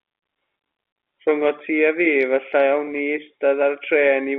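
Nothing stood out on listening; the speech carries the narrow band of an ordinary telephone line, roughly 300 Hz to 3.5 kHz, from its G.711 coding, with no event calling for attention.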